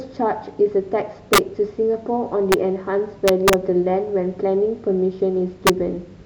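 A speech clip with integer overflow on loud peaks. Violent cracks sound at 1.33 to 1.38 s, 2.52 s, 3.28 to 3.54 s and 5.67 to 5.70 s. Peaks pushed about 1 to 3 dB past the integer limit wrap to the opposite sign instead of limiting. Each one snaps across the full range.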